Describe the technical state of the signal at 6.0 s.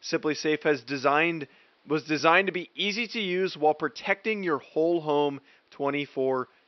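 At 6.0 s the signal is intact, with only the room's own background noise sitting about 42 dB below the speech.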